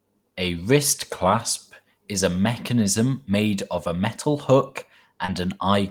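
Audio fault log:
0.95–1.69 s, drift correction step: the speech slows by about 5.5% and drops almost a semitone (about 97 cents), then snaps back just before "is a mechanism made". This is likely a clock-matching rate change. Speed and pitch move together, unlike a pitch-only glitch or a dropout.
5.25–5.29 s, short concealed packet loss: right after "of a metal hook", about 30 ms of missing audio is filled by continuing the preceding sound and then blending back, leaving a brief smear. Nothing goes silent and the pitch doesn't shift, which sets it apart from a dropout or a rate step.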